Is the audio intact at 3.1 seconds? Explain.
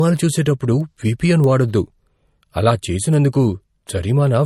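No. At 3.1 s the speech is affected by two faults. Word clock ticks run from 0.17 s to 4.41 s, recurring about every 0.2 s. A receiving device is running on its own clock, off by about 100 ppm. Each time the clocks slip, a single sample is dropped or repeated. The result is a sharp, uneven tick.

MP3 compression is also present at that moment. Nothing is heard above 12.6 kHz, and the speech has a plainly audible watery, swirling quality. That likely comes from a starved encoder, which fits a low bitrate around 40 kbps. It cuts the treble and lets weak frequency detail flicker between frames.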